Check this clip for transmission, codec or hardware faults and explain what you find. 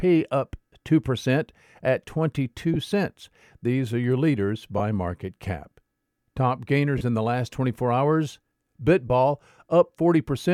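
The speech has four brief dropouts of lost LE Audio frames. At 2.74–2.76 s, 4.78–4.80 s (between "are your leaders" and "market cap"), 6.98–7.01 s (just before "in the last") and 9.08–9.10 s, a short hissy smear replaces the speech. Each gap is about 20 ms, and the third about 30 ms, which fits two or three lost 10 ms frames. The LC3 decoder filled them by repeating the last spectrum with scrambled signs.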